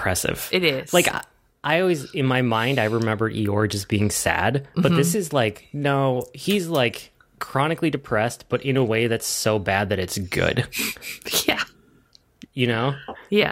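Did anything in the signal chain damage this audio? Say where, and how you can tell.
No, nothing along the chain audibly damages this speech recording, and its signal shows no break, distortion or other defect at any point.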